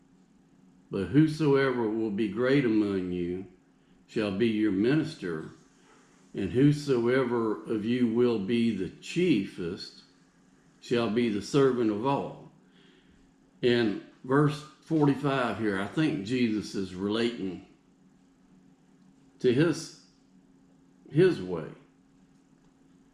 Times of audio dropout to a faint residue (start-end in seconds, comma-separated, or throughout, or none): none